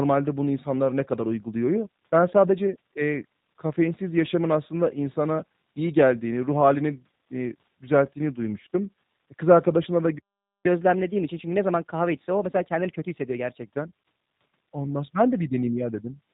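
Throughout the clip the speech carries plainly audible G.729 codec damage. Nothing above 4 kHz remains, and the voice has a rough, slightly synthetic texture from being rebuilt by a vocal tract filter, pitch predictor and sparse pulses, which fits an 8 kbit/s G.729-type codec.

At 10.18 s a playback stall cuts the audio to silence for about 0.46 s, until 10.66 s. The speech halts mid-flow and then resumes. The gap is likely the player running out of buffered data or having its output thread blocked.

From 10.66 s to 13.66 s the player catches up at higher speed, running at 1.15 times normal by resampling. Speed and pitch rise together, roughly two semitones up, so the speech sounds hurried and slightly chipmunk-like before dropping back to normal at 13.66 s.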